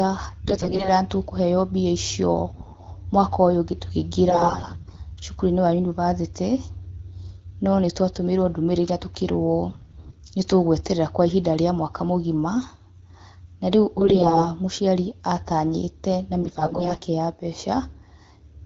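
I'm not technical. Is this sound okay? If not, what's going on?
No. The speech turns hoarse, scratchy and gargly in six short bursts: 0.44 to 0.89 s, just before "nĩ tũkũheo mbia icio", 2.49 to 2.81 s, 4.29 to 4.97 s, 9.70 to 10.15 s, before "nĩ tũ gweterera kwa", 13.98 to 14.49 s, before "mũciari atanyĩte na", and 16.42 to 17.02 s. These are AMR bit errors. On a weak phone link, some of the less protected parts of the coded speech arrived corrupted. The first burst is the roughest.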